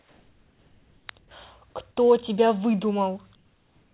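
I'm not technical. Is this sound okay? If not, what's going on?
No, not quite. In the quiet stretches, from the start to 1.07 s, briefly from 1.19 to 1.31 s, and from 3.35 s to the end, the real room sound is replaced by a flat, even hiss that's slightly quieter. That's comfort noise in place of the background, likely from the call system going silent when nobody's talking and filling the gap with made-up noise. The muffled, phone-like tone comes from the call line itself.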